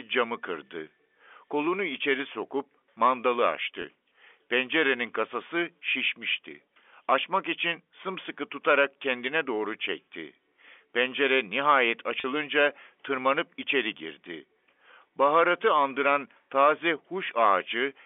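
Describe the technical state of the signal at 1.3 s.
At 1.3 s the audio is intact, with nothing wrong at that moment beyond the narrow telephone band of G.711 coding, which confines the speech to roughly 300 Hz to 3.5 kHz.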